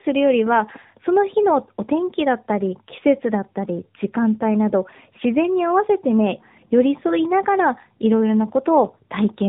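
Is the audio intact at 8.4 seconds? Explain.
No, tandem speech coding runs throughout, including 8.4 s: the speech passed through two narrowband speech coders in a row, the second re-encoding the first's output. It sounds rough, muffled and warbly, with nothing above 3.8 kHz.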